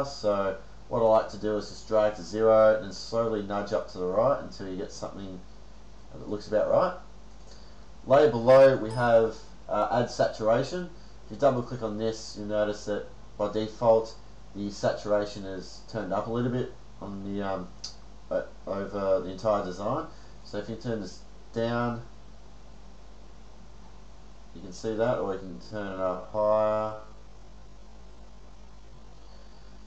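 From 25.39 s to the end there's a time-stretched section, slowed to about 0.6x, likely stretched to fill a length, so it drags at unchanged pitch.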